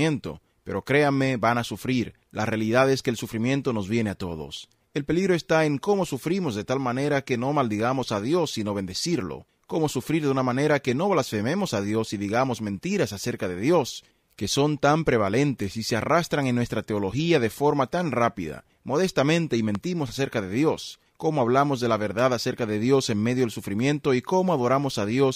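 At 19.75 to 19.77 s a single loud pop, roughly 10 dB above the surrounding sound, lands on top of the audio, which carries on beneath it without a gap. That separates it from a dropout or digital click, and it most likely comes from a voltage spike at a plug, switch or static discharge.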